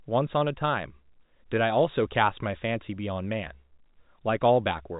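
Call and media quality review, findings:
Nothing stood out on listening to this speech over G.711 telephone coding, band-limited to about 3.8 kHz as expected for the format.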